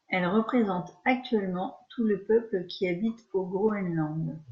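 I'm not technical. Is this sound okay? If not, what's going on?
No. Near the end of this speech clip, from 3.68 to 3.71 s, there is a brief chirp, squeak or blip. That is a corrupt frame decoded. A few damaged chunks of compressed audio were played anyway, putting sound at the wrong pitches for a moment.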